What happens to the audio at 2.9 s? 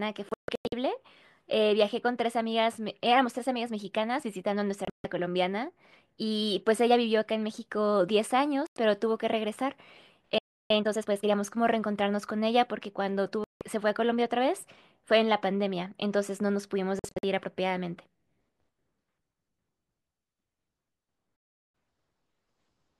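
Nothing goes wrong at 2.9 s: the speech there plays through intact, with no dropout, click, distortion or other fault at that moment.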